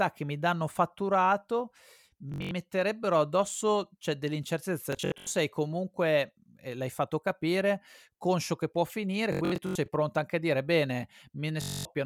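Bluetooth stutter hits at 2.30 to 2.51 s after "che mi danno fatturato", 4.93 to 5.27 s before "sei comunque eh l'hai", 9.33 to 9.88 s before "pronto anche a dire", and 11.62 to 11.85 s. Lost or late packets made the receiver replay its last short buffer, giving a machine-gun buzz with runs up to 85 ms. Each burst drops 171 to 277 ms of speech, and the sound then resumes further on.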